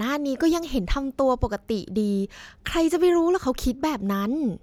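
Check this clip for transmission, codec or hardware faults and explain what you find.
No transmission, codec or hardware faults are audible here.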